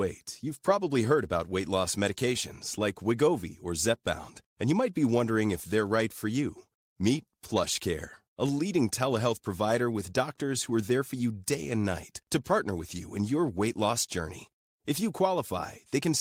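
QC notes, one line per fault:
No faults detected.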